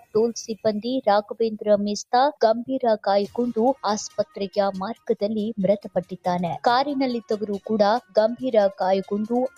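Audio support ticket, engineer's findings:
Noise suppressor applied to music or sounds, whole clip. A speech-tuned suppressor treats steady tones and tails as noise. Level swings around 10 dB, with attacks passing and sustains sinking into pumping. Waveform envelope breathes. Spectrogram shows intact onsets and truncated, fading partials.

Sound cut by the noise suppressor at 0.00–0.15, 1.23–1.39, 4.09–4.39, 4.94–5.09, 5.82–6.26 and 8.01–8.16 s. The suppressor turned this material down hardest, with drops of about 13–20 dB, deepest near 5.82 s. These show as waveform envelope notches and dark vertical bands on the spectrogram.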